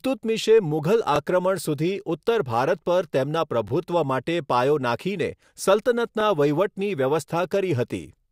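The speech was processed in 2.5 s overlapping chunks, each replaying the last 23 ms, causing brief stutters at 1.16–1.18, 3.68–3.71 and 6.21–6.23 s.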